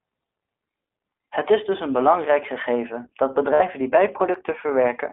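Speech clip carried through the iLBC codec, with plainly audible coding damage. The band is limited to about 250 Hz to 3.5 kHz, and the excitation of each 20 ms frame is coded on its own, giving a slightly rough, synthetic texture, consistent with the 15.2 kbps mode. Lost iLBC frames appear from 3.54 to 3.62 s, just after "een belangrijk gegeven dat": a 60 ms gap, which fits three lost 20 ms frames, is filled by a repeated pitch cycle mixed with noise, heard as a brief buzzy held vowel before clean decoding resumes.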